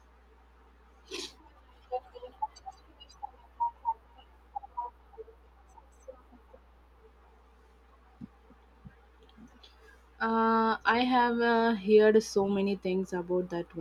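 From start to finish, mains hum sits beneath the speech: a steady 60 Hz tone, roughly 35 dB below the speech, from power-line energy leaking in through a ground loop or nearby transformer. Unlike wind or handling rumble, its pitch and level never waver.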